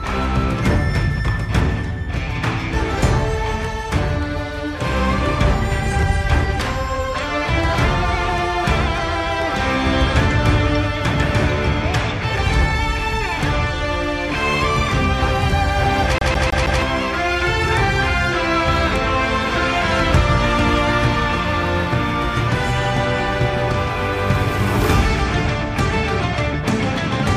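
At 16.18 s the CD is stuck on one turn until 16.82 s: a scratch keeps knocking the laser back one track, so a 160 ms slice repeats four times, each with a brief mute. Unlike irregular dropout glitches, the stutter is fast and perfectly even.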